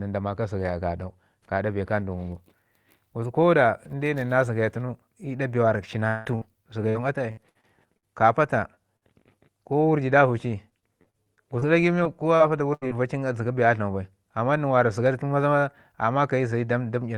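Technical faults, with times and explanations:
6.07–6.27 s, long network dropout: a stretch of about 180 ms of the speech goes missing, likely from the network stalling, and the receiver carries the last sound forward as a fading buzz or hiss the whole way. Unlike a short burst, the patch runs close to two tenths of a second before the speech resumes further on.
6.35–6.43 s and 8.97–9.04 s, burst of packet loss: each time about 60 ms of speech never arrives, and the receiver holds the last sound as a buzz or hiss that fades before the audio picks up again with a piece missing. It is a single gap, not a train of them.
6.89–8.05 s, 10.70–11.64 s and 12.00–13.10 s, repeated packet loss (robotic sound): holes of up to 77 ms keep recurring, five, seven and four of them, each filled by extending the previous sound, so the speech turns choppy with pieces missing. What sets it apart is the repetition across a second or so, with 14 to 22 percent of each stretch patched.
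8.75 s and 9.24–9.36 s, short concealed packet loss: about 20 ms is lost each time and bridged by continuing the last sound, then blended back in, giving only a brief smear or wobble. It is far shorter than a burst.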